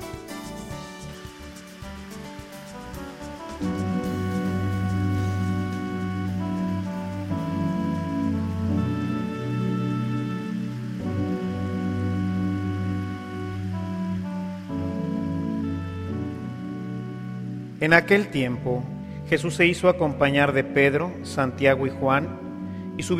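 No technical faults can be heard at any point in the recording.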